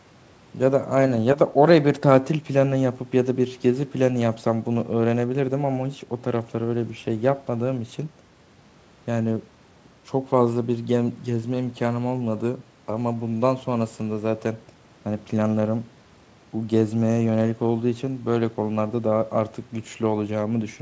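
Speech with no technical faults. The sound stops at 8 kHz, as expected from call microphone processing and a wideband call link, which fits G.722 at 64 kbps.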